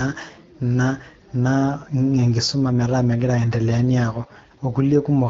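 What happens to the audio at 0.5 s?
Nothing goes wrong at 0.5 s: the speech runs through intact, carried by the AMR wideband (HD Voice) codec at 12.65 kbit/s, a rate at which it stays clear.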